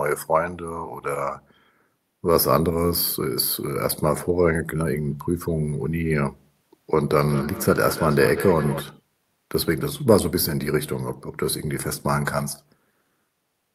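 From 7.2 to 8.88 s the speech comes back on itself, each stretch returning about a fifth of a second later, the repeats sitting about 10 dB below the direct speech at their loudest. This is feedback echo between two devices: two devices in the same room are on one call, and one replays what the other's microphone sent. That microphone captures the playback again, which the other device's echo canceller never removes.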